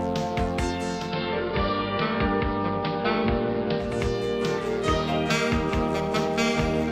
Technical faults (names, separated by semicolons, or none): digital radio blending to analogue